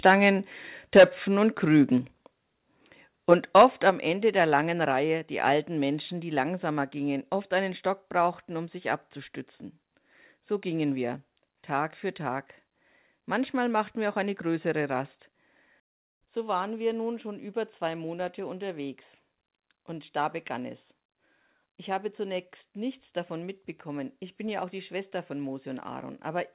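From 0.05 to 0.28 s the loudest sounds take on a harsh, crackling edge, driven about 5 dB past the converter's limit with only a small share of samples flattened. This is likely microphone overload: input gain set too high for the converter, so waveform peaks are sheared off. At 0.95 to 1.04 s the crackle turns harsher, about 11 dB over, with a large fraction of the waveform squared off. It returns more mildly from 3.31 to 3.9 s, about 6 dB over, with only a little of the signal cut.

At 0.99 s, right inside that worst burst, the whole sound, background included, drops abruptly by about 2 dB. It drops again at 1.98 s by about 3 dB and at 3.9 s, just as the last distorted stretch ends, by about 5 dB. These steps are likely the microphone volume stepped down by the call software reacting to clipping, lowering device input gain in single jumps. Through the narrowband WebRTC call path, nothing is heard above 4 kHz, consistent with a G.711 telephone codec.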